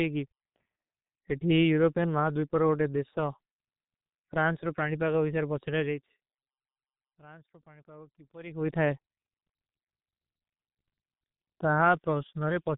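Throughout the speech, the signal has been squeezed through the G.723.1 codec at a very low rate, which fits roughly 6 kbit/s. Nothing above 3.8 kHz survives, so the speech sounds muffled and hoarse, with consonants blurred and smeared together.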